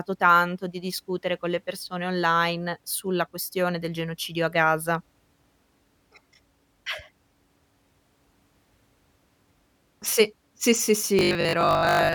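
Right after "sì sì", from 11.19 s to the end at 12.15 s, the speech takes on robotic sound from repeated short buffers: a rigid metallic buzz at 50 Hz. It's likely audio arriving too slowly, with about half the time filled by looping 20 ms chunks.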